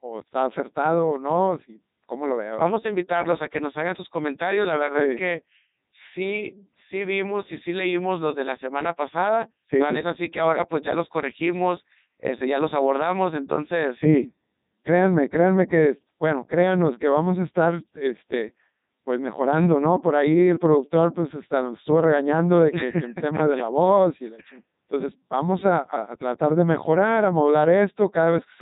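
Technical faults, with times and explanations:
Throughout: Codec 2 vocoder. Speech is rebuilt from pitch and spectral envelope as sine waves, so it sounds heavily buzzy and robotic, with nothing above 3.8 kHz, consistent with a 3.2 kbit/s mode.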